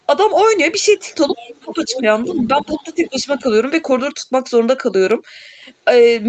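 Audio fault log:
1.3–1.6 s, 1.89–2.01 s, 2.19–2.83 s and 3.0–3.23 s, other side's voice leaking through: a faint second voice surfaces in scraps, mostly about 20 dB under the main talker and about 10 dB under at 1.89 s, likely loudspeaker echo that the echo canceller failed to remove from the microphone.
1.6–2.07 s and 2.26–3.45 s, speech suppressed in double talk: the main voice dips in pieces while the far side is playing on the loudspeaker, dropping by up to about 20 dB in the first stretch and about 10 dB in the second. This likely happens because the canceller, unable to separate talker from echo, turns both down.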